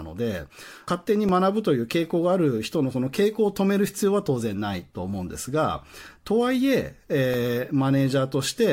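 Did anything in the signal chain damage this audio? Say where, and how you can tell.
Yes, at the driver or buffer stage. There are two blocks of digital silence in the speech, at 1.29 s and 7.34 s, each heard as a tick. They're 1.45 ms and 1.2 ms long. The first fits a 64-sample buffer that wasn't filled in time, so the audio snaps to silence and back.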